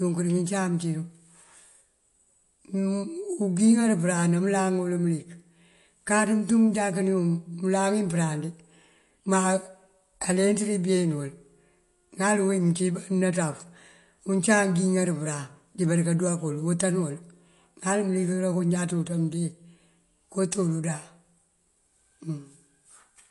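From start to finish the speech carries plainly audible codec damage, most likely MP3 compression at a low bitrate, something in the region of 48 kbps. Nothing comes through above about 11.3 kHz, so the top end sounds shaved off, and the weaker bits of the spectrum keep dropping in and out between frames. That gives the speech a watery, swirly texture, with metallic chirps on the s sounds and consonant attacks that come out smeared.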